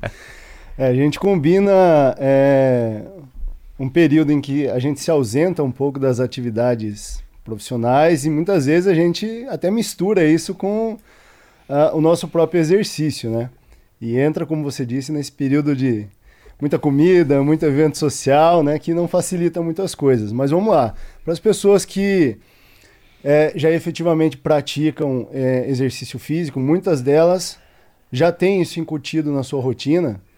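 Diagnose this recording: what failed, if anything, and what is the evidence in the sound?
Nothing failed in this recording, and the sound gives no evidence of any fault.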